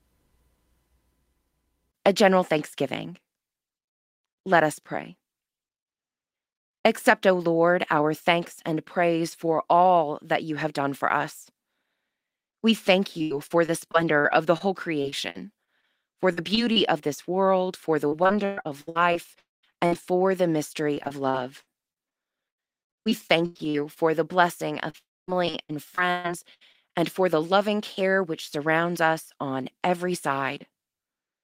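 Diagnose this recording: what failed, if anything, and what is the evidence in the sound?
The network path failed first with short concealed packet loss at 12.49 to 12.55 s, where about 40 ms of speech never arrived in time. The decoder stretched the preceding sound across the hole, which shows on a spectrogram as a brief smear of frozen harmonics.

Repeated packet loss, heard as robotic sound, spans 13.19 to 16.78 s (ending before "of this world for"), 18.08 to 19.97 s, 20.94 to 23.98 s (before "the blessing"), and 24.90 to 26.76 s (between "the blessing" and "and for the loving"). Gaps up to 135 ms recur, each patched by repeating the last pitch, so the waveform shows choppy, smoothed blocks.

Twice, at 19.39 to 19.65 s and 24.98 to 25.30 s, the sound turns into a fading buzz and then falls silent for about 180 ms and 240 ms before resuming with material missing. On the waveform this appears as a decaying tail followed by a flat gap, likely a long network dropout.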